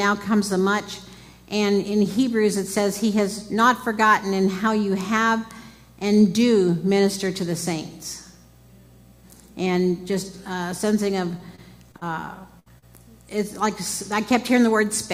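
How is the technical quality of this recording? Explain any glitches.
Quality drops in the last few seconds, where three closely spaced packet-loss faults break up the sound between about 11.4 and 12.8 s.

From 11.37 to 12.03 s there is repeated packet loss, giving a robotic sound. Four separate gaps, the longest 36 ms, were each patched by extending the preceding sound. About 15% of that stretch is filler, so the result is choppy and robotic. The recurrence, not any single long hole, sets it apart.

At 12.59 to 12.70 s comes a burst of packet loss. About 60 ms went missing at once and was covered by continuing the last sound while fading it, heard as a brief held buzz or hiss. Playback then resumes slightly ahead, with a sliver of audio skipped. It is one longer dropout rather than a chain of them.

At 12.78 to 12.84 s there is a short concealed packet loss. Roughly 40 ms never arrived and was bridged from the preceding pitch or noise, then blended back in. 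It is briefer than the burst, a quick smear or wobble.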